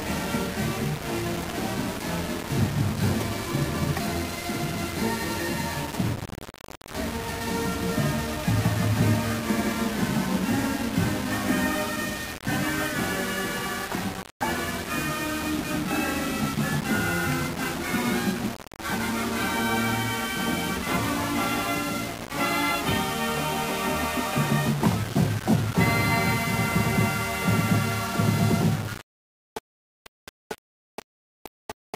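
From start to finish the audio carries a coarse, grainy distortion that rises and falls with the signal. Quiet passages turn rough and sputtery, and the softest moments collapse toward silence. The error sits only around 10 dB below the signal, which fits a 4-bit word length. The likely cause is low bit depth without dither, with samples rounded to the nearest step so the error tracks the waveform.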